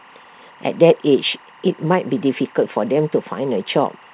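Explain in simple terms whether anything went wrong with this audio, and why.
Behind the speech, for the whole clip, there is a faint, steady chirping warble that flips between two high-ish pitches, around 1 kHz and 2 kHz. It sits well below the speech but never stops. This is timecode bleed. A timing signal meant to keep recording gear in step, here running at the film-style rate of 23.976 frames per second, leaked from a nearby track or cable into the audio.

The delivery also feels subtly uneven, with small stumbles in the pacing. These come from clock drift between sender and receiver. The sending device's clock ran about 1.5% slow compared with the receiving end, so the receiver was always getting sound slightly too slowly and had to fill in the shortfall to avoid running dry.

Those fill-ins are the repeated timing corrections, heard from about 0.25 s to 4.05 s. The receiver kept repeating tiny pieces of the sound, always in the same direction but at irregular moments. 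Together they stretch the passage to roughly 98% speed and add about 70 ms overall. Each one is small, so they come across as slight hiccups or a wobbly rhythm rather than obvious glitches.

The call path itself, with its telephone-style sound that holds nothing above 4 kHz, is working as expected.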